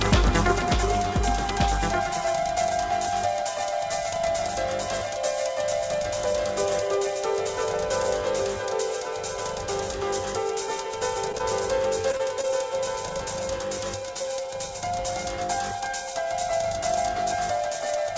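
Throughout the clip, a doubled audio track runs under the original. The likely cause is a second capture through a slower path mixing the same audio back in. A full-band copy trails the original by about a second and a half, a few decibels quieter. It carries no reverberant tail or room colouring, so everything is heard twice, cleanly, like a dry echo pinned at a fixed lag.

At 11.32 to 11.36 s, a short stall from a late packet occurs. A packet missed its playout deadline and the jitter buffer ran dry. The receiver stretched the last sound by 19 ms until the packet arrived, then resumed from the same point. Nothing is lost and the playout delay grows by 19 ms, but the sound hangs a moment too long, with a faint buzz or dip.

Right after, at 11.38 to 11.41 s, comes a short concealed packet loss. About 20 ms of audio never reached the decoder in time. The receiver bridged the hole by continuing the preceding sound, then crossfaded back into the real signal. 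This leaves a brief smear or wobble where a sliver of the audio simply drops out.

From 12.09 to 12.45 s, repeated packet loss produces robotic sound. Four separate gaps fall inside this span, the longest 21 ms, removing about 60 ms in total. Each is patched by extending the last sound, and concealment covers close to a fifth of the stretch. Because the holes arrive in quick succession, the audio turns choppy, with small pieces missing.

All of this passes through the call path, where the codec cuts off everything above 8 kHz. That fits a G.722 wideband setup.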